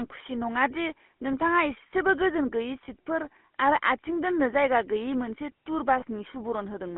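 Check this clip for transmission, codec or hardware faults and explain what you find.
Two kinds of fault are audible: GSM full-rate coding across the whole clip, and lost GSM frames at two points.

GSM full-rate codec, throughout: the voice is rebuilt from a vocal-tract model excited by sparse, regularly spaced pulses, at a rate that fits about 13 kbps. The band runs only from 200 Hz to 3.4 kHz, and the damage is plainly audible as a buzzy, gravelly roughness.

Lost GSM frames, 2.84 to 2.89 s, just after "नोंथाङा इसेबो गोजोन गैयै", and 6.00 to 6.04 s: the decoder fills each gap by repeating the last good frame's settings. The gaps are about 40 ms and 20 ms, consistent with two lost frames and then one. Each is heard as a brief rough, metallic ring.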